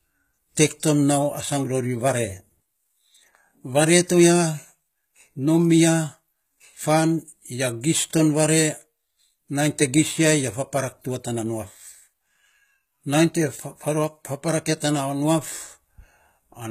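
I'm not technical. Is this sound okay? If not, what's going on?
No, there's plainly audible damage throughout: the s sounds in this speech come out gritty and lispy, and the crisp treble is faked. That's likely HE-AAC compression.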